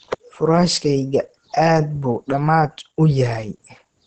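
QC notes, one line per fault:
Throughout: Opus compression; plainly audible muffled, hoarse speech with nothing above 8.7 kHz, likely its SILK speech mode at a bitrate around 16 kbps.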